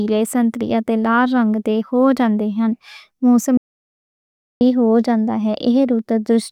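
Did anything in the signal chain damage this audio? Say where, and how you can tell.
Yes. There is an audio dropout to silence from 3.57 s to 4.61 s in this speech, removing about 1.04 s of material. The speech stops abruptly mid-flow and resumes just as abruptly, and the gap between is digital silence with no room tone or noise floor. The cause is likely at the input stage: a lost device connection, failed link or momentary mute, with the recorder continuing to write silence until the signal returned.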